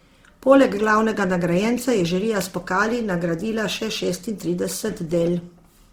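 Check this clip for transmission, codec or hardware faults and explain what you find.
One fault runs through the whole clip: Opus compression at a low bitrate. The likely cause is an Opus encoder in its CELT music mode starved of bits, with a graininess that fits a rate of about 16 kbps. When a band lacks bits, CELT keeps its energy but fills in the detail by folding lower bands or inserting noise. The bandwidth stays full, reaching about 20.3 kHz, but the speech sounds rough, noisy and grainy throughout, with plainly audible damage.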